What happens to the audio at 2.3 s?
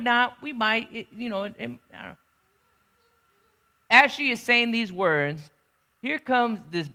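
At 2.3 s the speech runs through cleanly, with no dropout, click, distortion or other fault at that point.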